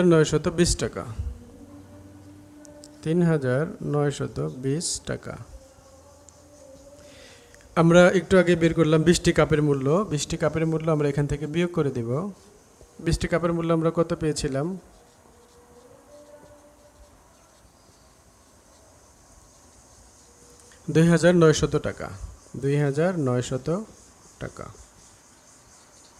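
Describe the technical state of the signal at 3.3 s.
At 3.3 s the signal is intact, with no dropout, distortion, noise or other technical fault audible at that point.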